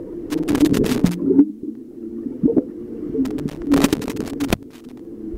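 From 0.30 to 1.15 s, and again from 3.25 to 5.05 s, the audio breaks into irregular bursts of scratching and crackle, a clear case of loose connector crackle. A worn or dirty contact is intermittently making and breaking as it shifts, chopping the signal into fragments. The second burst is longer, running about 1.8 s.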